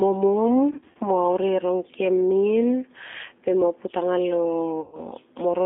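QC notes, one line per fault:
Throughout: G.729 codec. The speech sounds plainly rough and slightly synthetic, with a thin, boxed-in telephone quality and nothing much below about 250 Hz or above about 3.6 kHz. The damage is plainly audible because the coder keeps only a vocal tract filter shape, a pitch predictor and a few pulses per short frame at 8 kbit/s, so the fine texture of the speech is rebuilt rather than carried.
0.71 to 0.98 s: VoIP packet loss concealed by the speech codec. The speech turns briefly buzzy and smeared, with short stretches that stall into a tone-like drone and weaken before recovering. About 150 ms of audio went missing, scattered over roughly 240 ms in gaps no longer than 30 ms. Each gap was filled by extending the last pitch and filter with falling gain, and the decoder needed a moment to settle after each one.
4.81 to 5.02 s: VoIP packet loss concealed by the speech codec. 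Near the end the sound again stretches into a buzzy, fading drone, then stays weak and distorted for a short time afterwards. About 120 ms was lost here and the decoder covered it by repeating its last pitch and vocal tract shape at steadily lower level. Because each frame builds on the one before, the recovery lags behind the returning packets.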